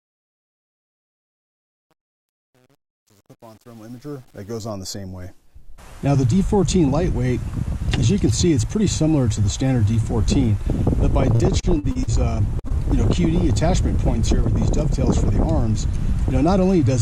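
From 0.0 to about 4.7 s the fade-in has truncation distortion on a fade. A gain stage quantised the quiet start too coarsely and added no dither, which fits an 8-bit path. Up to about 4.18 s the sound is gritty. On a waveform this shows as blocky square steps. A spectrogram shows broadband hash instead of clean partials.

From 11.35 to 12.10 s there is repeated packet loss, the robotic sound. Several short holes, the longest 45 ms, were patched by extending the preceding sound. About a quarter of the span is concealed and about 120 ms is lost outright. It sounds choppy. The spectrogram shows smeared, frozen harmonic bands broken by abrupt seams.

At 12.59 to 12.67 s comes a short stall from a late packet. The jitter buffer ran dry, so the last sound was held for 48 ms until the data arrived. Nothing is lost. It sounds like a slightly buzzy hold, and a spectrogram shows horizontally stretched, static bands.

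Immediately after, at 12.68 to 12.73 s, there is a short concealed packet loss. About 40 ms never arrived and 20 ms was synthesised in its place. It is heard as a brief smear or wobble. The spectrogram shows a blurred strip with a slight discontinuity where real audio resumes.

From 15.70 to 16.72 s a jitter buffer speed-up trims excess delay. Short pitch-period slices were cut repeatedly, about 40 ms in total. Playback runs at 104% speed with unchanged pitch. Spectrogram events sit slightly compressed in time, with tiny seams at the splice points.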